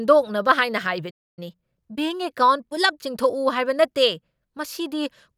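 The clip is speech with a playback stall from 1.10 to 1.39 s, where the sound cuts out mid-flow for about 0.27 s, likely because the player's buffer ran dry or its thread was blocked. On a waveform this shows as a flat line. A spectrogram shows a clean vertical blank band across all frequencies. Right after that, from 1.39 to 3.19 s, comes a time-compressed catch-up. The player trims its backlog by dropping and cross-fading short slices, so the speech runs about 1.15 times faster at normal pitch. On a spectrogram the harmonic spacing stays the same while syllables and gaps look squeezed closer together, with small smeared seams where pieces were spliced.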